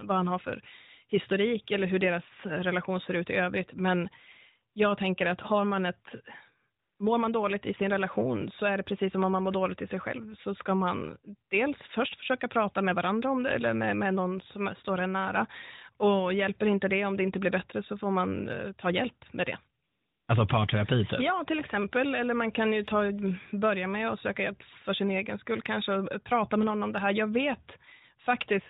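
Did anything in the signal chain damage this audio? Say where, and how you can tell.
Yes. AMR comfort noise, from the codec's discontinuous transmission, replaces the real background at 4.74 s, just before "jag tänker att har", at 6.80 to 7.00 s, before "mår man dåligt i", and at 19.84 to 20.28 s, after "ta hjälp med det". In each gap the background becomes a smooth, steady synthetic hiss, because the sender judged those stretches silent and stopped sending speech frames.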